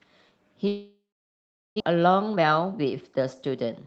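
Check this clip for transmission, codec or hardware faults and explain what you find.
Two transmission faults are present in this speech, which came through an Opus call path with audio limited to about 8 kHz.

Long network dropout, 0.67 to 1.82 s: packets likely stopped arriving. The receiver stretched the last sound into a fading buzz, then near-silence, and about 0.6 s is lost.

Jitter buffer speed-up, 1.92 s to the end: the overfull buffer repeatedly cut pitch-period pieces, so speech runs at 116% speed and sounds hurried at unchanged pitch.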